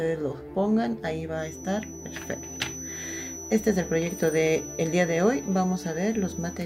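From 1.33 s on, a thin 6 kHz feedback whistle sits about 15 dB below the sound, likely a near-feedback loop. Unlike a fixed test tone, it swells and fades slowly in level.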